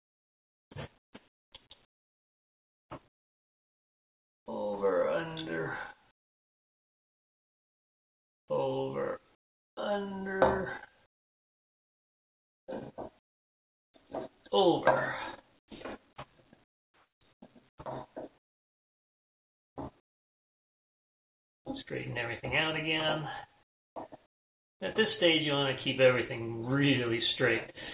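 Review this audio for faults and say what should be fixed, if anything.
In the pauses at 0.0–4.46, 6.11–8.48, 9.35–9.77, 11.06–13.94, 15.59–15.68, 16.64–21.65 and 23.63–24.8 s, the real background gives way to a flat, featureless hiss that drops by as much as about 30 dB. This is likely comfort noise in place of the background. The sender's activity detector halts transmission during quiet stretches, and the receiver fills each gap with synthetic noise. Throughout, the G.711 A-law call path leaves nothing above 4 kHz.

To prevent it, turn off discontinuous transmission on the sending side so the true background is sent continuously.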